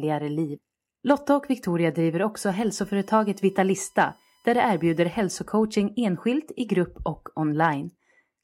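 USB whine runs from 2.67 to 5.26 s, starting just after "driver också". Current drawn in 1 ms USB frames leaks through power or ground, adding a fixed-pitch 1 kHz tone and harmonics, loudest at 5 kHz, roughly 35 dB below the speech.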